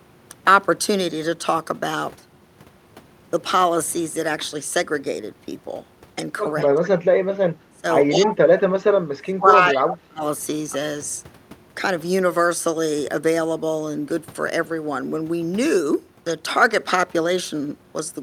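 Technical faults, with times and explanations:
6.63–6.68 s, echo leak: A faint delayed copy of the speech appears, about 20 dB down and 191 ms late. Likely a loudspeaker echo the canceller missed.
7.51–7.85 s, speech suppressed in double talk: The speech dips by up to about 25 dB for roughly a fifth of a second. Likely the canceller muting its own talker along with the loudspeaker echo.
8.09–10.22 s, speech suppressed in double talk: Longer suppression, up to about 30 dB deep, across roughly two seconds. The talker is likely turned down along with the echo.
9.72–9.80 s, echo leak: Another brief echo scrap, 191 ms delayed, louder at about 15 dB below the speech. This is likely residue passing the canceller.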